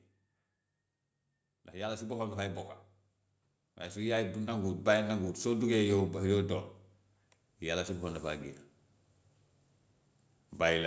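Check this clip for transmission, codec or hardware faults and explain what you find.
Automatic gain rising occurs twice in this speech: from 1.72 to 2.76 s by about 5 dB, and from 3.62 to 5.36 s by about 7 dB. Judging the input too quiet, the gain control ramped up, so voice and background noise swell together.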